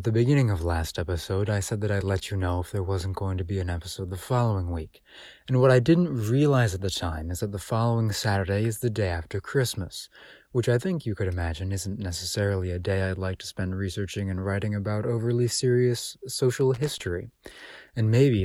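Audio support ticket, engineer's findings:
Irregular burst of crackle and scratching over the speech, 16.74 to 17.00 s, roughly a quarter second. Loose connector crackle. Probable component: worn or dirty plug or jack contact. Mechanism: contact making and breaking as the connector shifts, chopping the signal on and off; any DC on the line turns each break into a pop. Check and reseat or clean the connector, replace the cable if it recurs.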